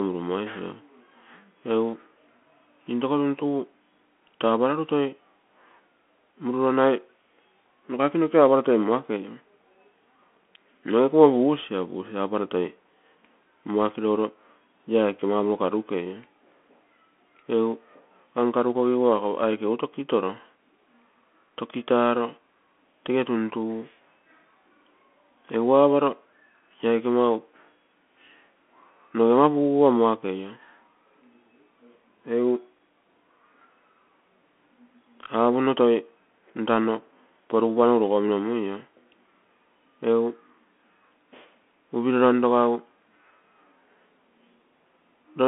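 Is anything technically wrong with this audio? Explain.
Yes. The whole clip has Bluetooth CVSD headset codec damage, and it's plainly audible. The speech is squeezed into a phone-like 200 to 3400 Hz band, with nothing above 3.8 kHz. Each sample is coded as one up-or-down bit, which fits a 64 kbps stream, so loud, sharp sounds outrun the adaptive step. Sibilants go scratchy over a grainy hiss.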